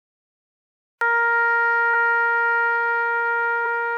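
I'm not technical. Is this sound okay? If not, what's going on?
No. This music has a cut-off start. It is silent until 1.01 s, then jumps in mid-sound, because the recording began too late.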